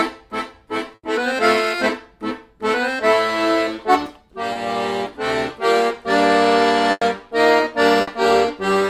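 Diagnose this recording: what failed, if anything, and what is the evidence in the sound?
Burst of packet loss at 0.95 to 1.05 s, 6.91 to 7.03 s and 8.01 to 8.09 s, a network fault. The receiver extends the last sound for 80, 100 and 60 ms, fading it, with 20 ms of silence at 6.9 s, then resumes later, skipping the lost audio.

Short concealed packet loss at 4.53 to 4.57 s, also on the network path. About 20 ms never arrived in time, so the decoder synthesised a continuation of the preceding sound and blended back in, leaving a brief smear rather than a gap.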